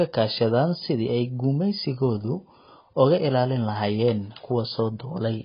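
Heavy AAC compression is the likely cause of the damage running through the whole speech clip, with a very low bitrate, consistent with something near 16 kbps, forcing the encoder to discard most of the spectrum. Nothing survives above 5 kHz, so the sound is dull and muffled, and the remaining bands are coarsely quantised, leaving a smeared, warbling texture on sustained sounds and a fizzy, hollow edge on sibilants.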